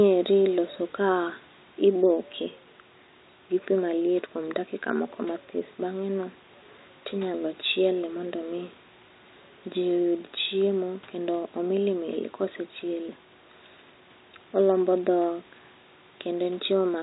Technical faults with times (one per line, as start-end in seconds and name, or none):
none